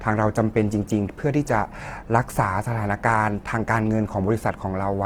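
A speech clip with plainly audible Opus compression throughout: grainy, rough, noise-filled texture in full bandwidth, likely from the music mode at a low bitrate, consistent with about 16 kbps.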